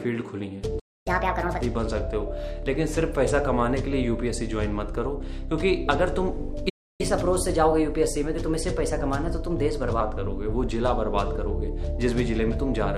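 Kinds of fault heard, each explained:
playback stall: the player likely ran dry or was blocked, so output drops to silence for about 0.27 s at 0.79 s and 0.3 s at 6.69 s.
catch-up at higher speed: the player resamples its backlog faster, so sound runs 1.5 times fast, about seven semitones high, then 1.1 times, slightly sharp, before settling.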